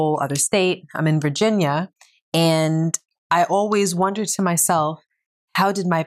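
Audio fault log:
No faults are heard anywhere in this speech recording. There is nothing here to log.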